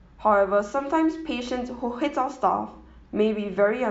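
A short speech recording with no audible technical faults anywhere in the signal.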